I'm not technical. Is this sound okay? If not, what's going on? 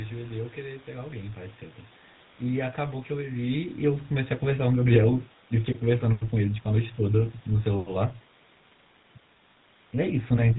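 No. Throughout, the speech has the buzzy, gravelly roughness of the GSM full-rate codec, an old phone-call squeeze that rebuilds the voice from sparse pulses and drops everything above 4 kHz.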